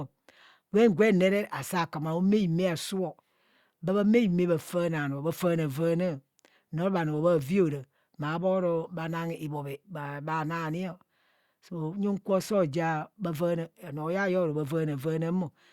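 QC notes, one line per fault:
No faults found.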